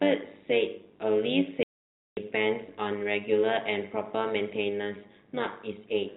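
A speech clip carried over a G.711 telephone path, so nothing above 4 kHz comes through. An overlap-add ripple runs through the whole clip. The level swings by about 11 dB around a hundred times a second. That gives a metallic buzz with extra tones around the voice. The windowed frames were rejoined with an overlap that does not sum to a steady gain. From 1.63 to 2.17 s there is packet loss filled with silence. The sound drops out completely for 540 ms, with hard edges at both ends. A gap that size fits a run of lost 10 ms packets, and the receiver played silence in their place.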